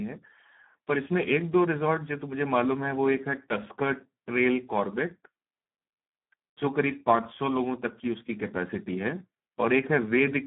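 From start to finish the speech carries Speex codec damage, and it's heavy: hoarse, buzzy and edging toward robotic, the sound of a CELP coder starved of excitation bits, which fits a low setting around 8 kbps. Only a phone-like 150 Hz to 3.5 kHz band survives, with nothing above 3.8 kHz.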